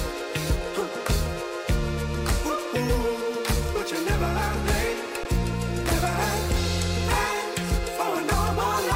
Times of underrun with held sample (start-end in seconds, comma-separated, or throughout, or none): 5.24